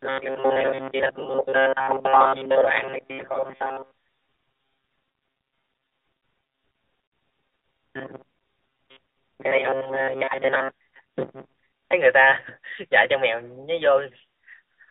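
Thin, buzzy speech runs through the whole clip, confined to roughly 300 Hz to 3.7 kHz with a synthetic edge. This is the AMR narrowband mobile codec, and the plainly audible damage points to a mid-rate mode around 10 kbps. From 0.01 to 11.93 s the voice becomes a rigid, metallic buzz locked near 134 Hz, loosely tracking the words. This is robotic sound from repeated short buffers, likely caused by a segment of about 7.5 ms being replayed over most of that span while fresh audio is dropped.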